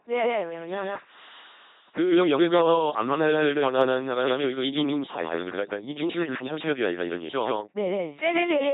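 From start to finish the speech is heard twice: a second, equally loud copy trails the first by roughly 150 ms, giving a stuttering, slapback doubling with no reverberant tail or change in tone between the two. Because the copy is full-strength and dry rather than a room echo, this doubled audio track most likely comes from the same signal being picked up a second time through a slower route, or two misaligned copies left together in an edit.

Both copies also carry a harsh, buzzing, robotic quality throughout, with nothing above 3.8 kHz and stretches where the voice turns into hiss or into a droning buzz at the wrong moments. This is the sound of the LPC-10 vocoder, and the heavy damage fits its 2.4 kbit/s rate. Rather than keeping the waveform, it rebuilds speech by passing either a regular pulse train or noise through a short vocal-tract filter. Each instant is forced to be fully voiced or fully unvoiced, and wrong choices produce those stray buzzes and hisses.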